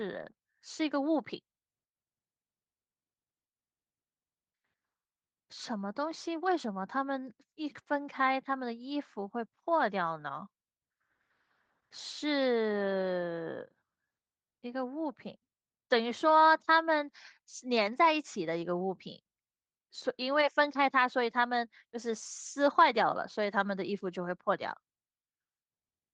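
Nothing is technically wrong with the speech in this clip.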